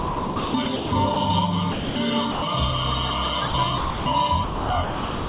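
From 0.00 to 1.16 s, the sender's voice detector likely kept switching transmission on and off. This is sound chopped by the voice detector: about 740 ms is replaced by comfort noise, so the audio stutters. At 1.72 to 1.96 s and again at 2.32 to 2.42 s, the detector likely mistook quiet sound for background and stopped sending. These are sounds dropped by the voice detector: 240 ms and then 100 ms vanish under steady comfort noise before the audio returns. The chopping comes back from 3.48 to 4.06 s, with about 340 ms replaced, and from 4.44 s to the end, with about 710 ms replaced. Both stretches break up the same way against a background capped at 4 kHz, which fits a G.711 call codec.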